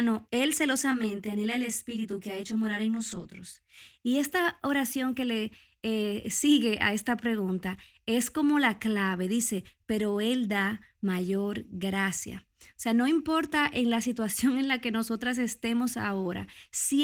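From 0.92 to 3.59 s, channel delay produces comb filtering: one channel lags by roughly 20 ms before mono summing, cutting regularly spaced notches from around 20 Hz upward and leaving the speech rough and slightly doubled. Within that stretch, at 3.11 to 3.25 s, a lost packet is rebuilt from error correction: about 80 ms, which points to several packets, is played from low-bitrate copies, sounding rougher and noisier.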